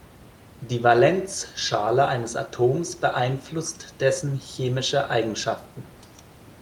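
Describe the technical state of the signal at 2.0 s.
At 2.0 s the speech signal is intact, with only the room's own background noise sitting about 23 dB below the speech.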